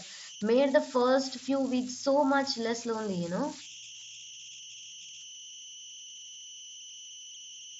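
A steady whistle around 3 kHz runs through the whole speech recording, most noticeable in the pauses, with a grainy texture under quieter passages, all sitting about 16 dB below the speech. These are converter idle tones: a delta-sigma converter working without dither settles into repeating bit patterns at low input levels, and those patterns come out as a tone set by the input's offset. The audio also shows the expected mSBC headset band limit, with nothing above about 7.7 kHz.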